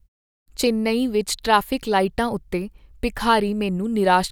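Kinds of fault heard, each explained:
Nothing stood out on listening to this speech clip.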